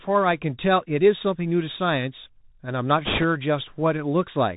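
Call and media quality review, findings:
Muffled, band-limited speech with scratchy s sounds and a granular hiss underneath, throughout. Bluetooth CVSD headset codec: nothing above 4 kHz passes, and the one-bit adaptive step can't keep up with loud high content. Fits a 64 kbps link.

Brief rushing, crackly noise over the speech, 3.05–3.24 s, with no sharp clicks. Bit errors on the Bluetooth voice link at around 3%. Each flipped bit nudges the CVSD step slightly, and the error then dies away.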